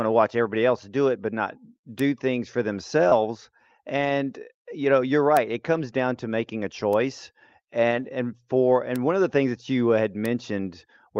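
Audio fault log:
1.99, 5.37, 6.93, 8.96, 10.26 s: bit error spike, a single sample knocked far off its value and straight back, so each is one bare tick with no relation to the speech, unlike the smeared concealment artefacts.
3.09 to 3.13 s: short concealed packet loss, about 20 ms missing and filled by extending the preceding sound, heard as a brief smear rather than a click.
3.11 to 3.13 s, 5.73 to 5.83 s, 7.91 to 8.05 s: lost packet rebuilt from error correction, low-bitrate copies standing in for 20, 60 and 80 ms of lost packets, so nothing drops out, but those stretches turn rougher and noisier instead of smearing.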